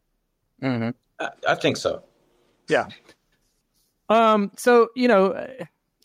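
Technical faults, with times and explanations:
Throughout, gain pumping: the background swells in pauses and dips by roughly 10 dB under loud syllables, likely from a fast limiter pulling back excessive gain. It rises and falls smoothly rather than cutting off as a gate would.
4.14 to 4.69 s, hard clipping: peaks pushed about 2 dB past the ceiling are sliced flat. This adds a brittle high crackle, unlike the rounded distortion of soft saturation.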